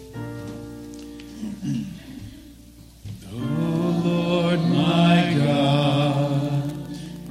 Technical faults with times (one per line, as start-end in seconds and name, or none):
5.68-7.30 Wi-Fi interference